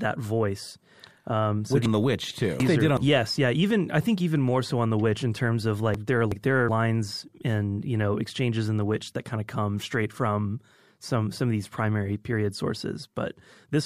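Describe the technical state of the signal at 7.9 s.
At 7.9 s the speech signal is intact, with no audible fault at that moment.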